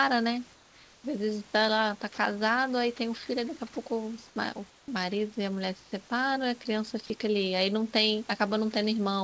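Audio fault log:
0.54–1.04 s, 4.28–4.36 s, 4.70–4.88 s, 5.84–5.92 s: comfort noise in place of the background. The sending side likely stopped transmitting during these pauses, and the receiver filled each gap with synthetic noise shaped to approximate the room. The gaps last 500 ms, 80 ms, 180 ms and 80 ms. The genuine background, sitting about 26 to 31 dB below the loudest sound, gives way to a smooth, featureless hiss about 2 to 4 dB quieter, so the ambience thins and flattens before the real room returns.
2.14–2.18 s and 7.06–7.10 s: sound dropped by the voice detector. Each time, the sender's detector likely misjudged part of the sound as background and cut transmission. The receiver covered the 40 ms gap with comfort noise, which swallows about 20 ms of the speech itself. What you hear is a brief clipped or missing fragment replaced by steady noise, and the sound comes back once the detector triggers again.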